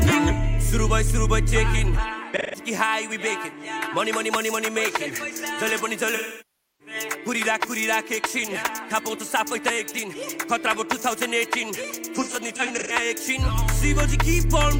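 At 2.37 to 2.59 s there is AAC frame loss with concealment. About 0.17 s of data is missing, which fits roughly four lost frames. The decoder fills the gap from the last good spectrum, leaving a brief smeared, noisy patch.

From 5.69 to 5.79 s, loose connector crackle appears as an irregular burst of scratching. An unreliable contact makes and breaks, chopping the signal.

From 6.09 to 6.94 s, a longer concealment covers about 0.64 s. The repeated spectrum decays toward silence and then fades back.

From 12.15 to 12.93 s, shorter dropouts totalling about 0.3 s are scattered across roughly 0.68 s. The longest lasts around 150 ms, giving a patchy, phasey stretch.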